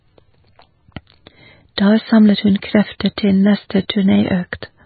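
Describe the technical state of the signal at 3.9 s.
At 3.88 s there is pre-echo. A short burst of hiss, about 14 ms long, arrives just ahead of a sharp onset and softens its attack. This happens because a transform codec spreads quantisation noise evenly across its whole block. When a loud attack lands late in that block, the noise sized for the attack also fills the quiet gap before it, so the hiss leads the event instead of being masked by it.

The moment also carries the damage present throughout the speech. Nothing is heard above 4.5 kHz, the band is watery and swirly, and consonant edges are smeared. That is likely heavy MP3 compression, consistent with a very low bitrate in the region of 18 kbps. Starved of bits, the encoder imposes a fixed treble cut-off and zeroes weak frequency lines that flicker on and off from frame to frame, which produces the unstable texture.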